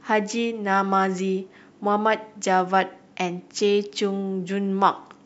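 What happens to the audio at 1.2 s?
Nothing goes wrong at 1.2 s; the speech carries on intact through that moment, with no break, click, dropout or change in level or tone.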